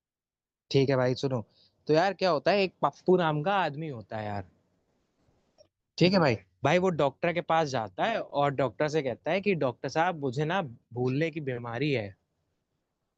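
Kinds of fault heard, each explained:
No technical faults can be heard in this speech.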